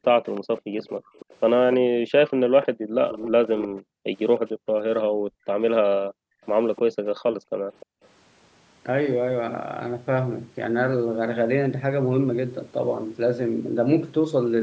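From 0.03 to 4.4 s a faint copy of the speech trails it by 304 ms, about 15 dB below it. This is likely an echo leak: the far end's echo canceller let loudspeaker sound picked up by its microphone pass back into the call. Between 1.0 and 6.42 s the background is gated by the echo canceller. The canceller pulls the microphone down while the loudspeaker plays, so the room sound dips by up to about 40 dB, for around two seconds in total. The same 304 ms delayed copy returns more weakly, about 25 dB down, from 6.43 to 6.79 s and again from 7.8 to 8.08 s. That last stretch overlaps a second gating dip from 7.38 to 8.02 s, lasting roughly half a second.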